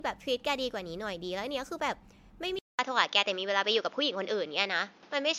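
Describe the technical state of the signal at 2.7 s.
Input switched to a poorer device, from 2.59 s to the end of the clip: at 2.7 s the signal sits in the short, roughly 200 ms gap left by the switch. After it, the band stops near 7 kHz, the level shifts by around 5 dB, and a new noise floor appears about 30 dB under the speech. The sound turns dull and boxy, most likely because recording moved to another microphone or a headset's call profile.

Generation loss runs through the whole clip, including this moment. Each lossy pass requantises on a fresh frame grid, so noise and spectral holes pile up, giving a swirly, hollow, smeared quality with blurred attacks. This likely comes from about seven rounds of MP3 encoding near 100 kbit/s.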